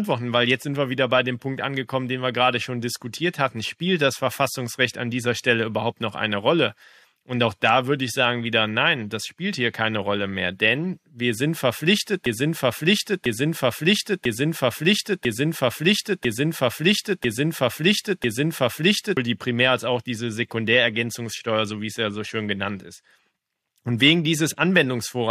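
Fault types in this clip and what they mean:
Broken-record loop: after "denn wir sind verpflichtet", a 1.0 s speech fragment repeats exactly seven times from 12.26 to 19.17 s, likely a stalled stream resending its last buffer; waveform and spectrogram show identical blocks tiled back to back, the intended speech lost.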